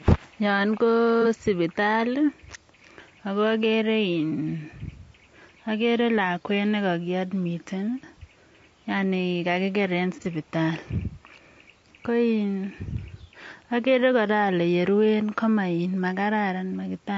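Speech carries plainly audible codec damage throughout: the voice sounds rough and grainy, with noise filling the gaps between harmonics. This likely comes from low-delay AAC compression, where short frames smear pitch harmonics, fitting a bitrate around 32 kbps. On a spectrogram the harmonic lines look blurred, with hiss between them. AAC frame loss with concealment appears at 1.22 s and 10.22 s, each a brief smeared, noisy patch of about 40 ms, consistent with one lost frame patched from the previous spectrum. Each shows as a short vertical smudge of diffuse energy breaking the harmonic stripes.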